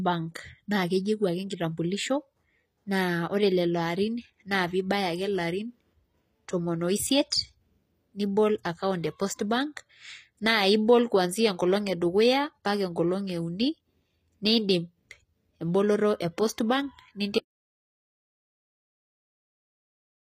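From start to finish the treble has plainly audible gritty, metallic colouring on s sounds and nothing above 15.5 kHz, likely HE-AAC compression at a low bitrate around 24 kbps rebuilding highs by band replication.

At 17.39 s the speech cuts off into dead silence, with no room tone, lasting to the end, an audio dropout to silence, likely from the input being lost while recording continued.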